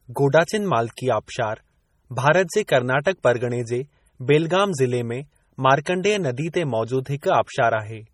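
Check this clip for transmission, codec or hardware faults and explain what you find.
Two faults are audible in this speech clip.

Throughout, the audio sounds heavily degraded, watery and swirly, with the top end closed off above about 19.4 kHz. This is likely MP3 compression: weak frequency lines are dropped and return frame by frame as bits run short, which fits a bitrate around 32 kbps.

At 0.96 s, an attack is preceded by a brief hiss and arrives softened. This is pre-echo: the encoder spread quantisation noise across its whole block, so noise meant for the loud onset fills the quiet 17 ms before it.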